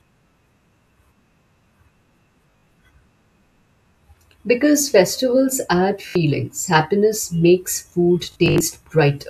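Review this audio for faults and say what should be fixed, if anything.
Bluetooth stutter occurs three times. From 2.51 to 2.67 s, about 122 ms of audio is lost in bursts, which fits several dropped packets. At 6.09 to 6.15 s, after "festivals add", 61 ms drops out before "happiness makes food". From 8.32 to 8.60 s, after "happiness makes food", about 163 ms goes missing. Each time the receiver replays a short slice, giving a buzzy stutter, then skips ahead. Keeping the transmitter close and free of interference would prevent it.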